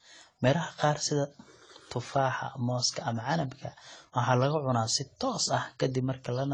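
From start to finish, the speech carries the layered artefacts of transcoding between lossy codecs. Nothing is present above 10.7 kHz, and the smeared, swirly texture of an earlier low-rate encode sits under a second layer of coding noise. This most likely comes from a low-bitrate AAC-LC pass, around 24 kbit/s, re-encoded to HE-AAC at a higher rate. The later encoder spends its bits preserving the first codec's damage and adds its own, so the higher bitrate restores neither the lost bandwidth nor the detail.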